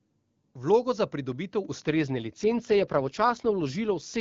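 A speech clip over AMR-WB, clean and clear at the start, with two faults close together. At 1.65 s the microphone volume is stepped up: voice and background both jump by about 4 dB in a single instant, because the call software judged the input too quiet and raised the device's input level. Because the background rises along with the voice, it is a change of input gain at the device and not the talker moving closer or speaking louder. It comes as one sudden step rather than a gradual ramp. From 1.85 s to the end at 4.20 s comes an AMR rate drop. The voice turns rougher, buzzier and more synthetic, which fits the network pushing the codec from 23.85 kbit/s down to about 8.85 kbit/s to spend more of its bits on error protection over a weak radio link. The telling detail is that the audio band stays just as wide and nothing drops out, so it is not a fallback to narrowband or packet loss. Only the texture degrades, and it stays degraded to the end.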